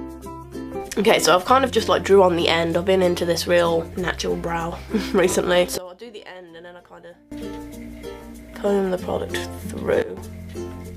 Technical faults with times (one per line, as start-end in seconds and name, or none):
5.78-7.32 sudden gain jump
10.02-10.17 sudden gain jump